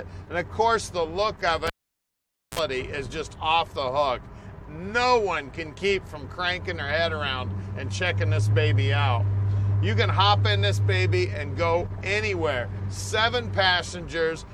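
A cable pulled and plugged in interrupts the audio from 1.67 to 2.59 s. A pop at 1.67 s marks the live connection breaking. Near silence follows for about 0.87 s, and then a 47 ms burst of 60 Hz mains buzz, which is the plug tip touching before it seats. A second pop comes as the sound returns. The two pops around a gap, with the mains buzz at re-entry, point to a physical disconnection rather than a digital dropout.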